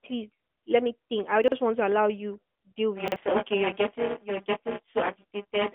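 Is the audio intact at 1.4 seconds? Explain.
No. Chunks are out of order from 1.44 to 1.52 s, between "let me think I" and "want to allow you". A 40 ms chunk plays one chunk late, after the one that should follow it, so that moment sounds jumbled.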